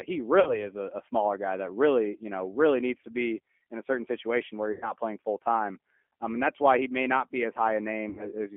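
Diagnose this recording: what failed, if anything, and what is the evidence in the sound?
G.729 codec, throughout, at the codec stage: the speech is confined to about 250 Hz to 3.4 kHz and sounds rough and synthetic, rebuilt at 8 kbit/s from a filter, pitch and sparse pulses.

VoIP packet loss concealed by the speech codec, at 0.40–0.66 s, 4.72–4.89 s and 8.09–8.29 s, at the network stage: 60, 100 and 80 ms went missing, and the decoder stretched its last pitch and filter into a fading buzzy tone or coloured noise before recovering.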